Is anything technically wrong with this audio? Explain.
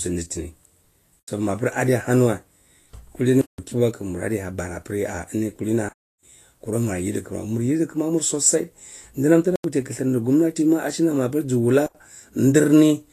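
Yes. Throughout the speech there is plainly audible damage, likely from Vorbis compression. Nothing sounds above 14.2 kHz, and the coarsely quantised treble turns fine detail into grainy hiss, which fits a low bitrate around 32 kbps. A spectrogram shows a hard ceiling with speckled energy beneath it.

Five blocks of digital silence cut the sound: 1.20 to 1.28 s, 9.56 to 9.64 s and 11.86 to 11.95 s (85 ms each), 3.41 to 3.58 s (171 ms), and 5.89 to 6.23 s (341 ms). The lengths fit whole blocks of 4096 samples and its multiples. The waveform drops to a flat line with no fade, leaving a hole in the speech.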